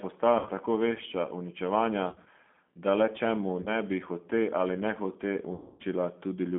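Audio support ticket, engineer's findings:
G.729 codec, whole clip: speech band-limited to roughly 200 Hz to 3.4 kHz, slightly rough and synthetic. Sounds like G.729A. Speech is rebuilt from a filter, a pitch predictor and a few pulses per frame, so fine detail goes grainy. The damage is plainly audible and the sound points to an 8 kbit/s link.

VoIP packet loss concealed by the speech codec, four spots. Lost audio gets filled with a stretched buzzy tone or coloured noise that fades, and it stays weak for a bit after packets come back.
0.39 to 0.49 s, just before "tako vešča uničevanja": about 60 ms gone, which fits three 20 ms packets.
2.10 to 2.28 s, between "tako vešča uničevanja" and "da le čemu": 80 ms lost, scattered over 160 ms, with the longest gap 40 ms.
3.62 to 3.73 s, after "da le čemu": 40 ms lost.
5.54 to 5.83 s: 260 ms lost, the worst one.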